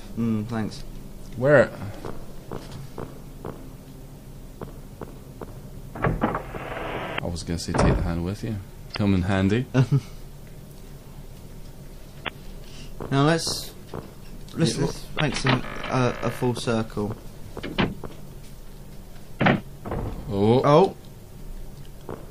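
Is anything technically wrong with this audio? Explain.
Yes, there are two problems. Throughout the clip the sound is plainly watery and swirly, with dulled treble and smeared attacks. This is likely MP3 compression at a low bitrate, around 64 kbps. Short of bits, the encoder cut the high frequencies and let weak components flicker between frames.

There are also five brief disruptions from damaged data in a compressed stream, at 7.15, 8.92, 12.24, 15.17 and 19.37 s, each about 45 ms long. Corrupted bytes made the decoder misread frames and resynchronise, producing a short chirp or blip.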